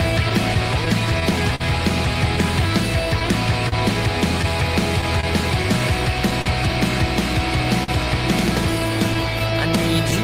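Throughout the clip, the sender's clock runs about 3 percent slower than the receiver's. This clock drift between sender and receiver keeps draining the jitter buffer, so the receiver has to repeat short pieces of sound to keep playback going. The result is small timing hiccups at uneven intervals across the whole clip, with the sound momentarily stuttering or dragging rather than flowing evenly.

From 0.29 to 1.62 s, scattered short gaps appear. About five packets arrive lost or late, and the receiver patches each hole by extending the preceding sound. The longest patch is roughly 50 ms. Nothing is actually missing, but the span carries brief smears and ticks. The same fault returns from 3.20 to 5.25 s, again about five times, with patches up to roughly 30 ms. It returns once more from 9.14 to 10.14 s as a handful of very short fills, around 10 ms each, which register as brief ticks.

At 6.42 to 6.48 s, a short stall from a late packet occurs. 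The packet misses its slot, the jitter buffer runs empty, and the receiver holds the last sound for 41 ms until the data arrives. Playback then resumes where it left off. A second stall at 7.84 to 7.90 s holds for 45 ms. Each one sounds like a brief freeze, with a slight buzz or dip as the sound is held too long.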